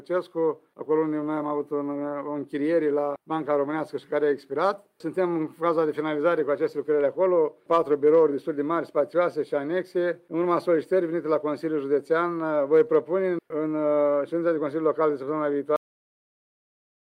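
At 15.76 s the sound suffers a cut-off end. The final buffers were never written out, so playback stops mid-sound with no decay and silence fills the remainder. The waveform falls abruptly to a flat line, and the spectrogram's energy ends in a sharp vertical edge.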